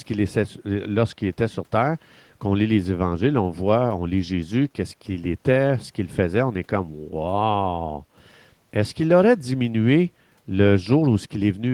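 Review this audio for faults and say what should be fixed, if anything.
Nothing stood out on listening to the speech, so there is nothing here that calls for a fix.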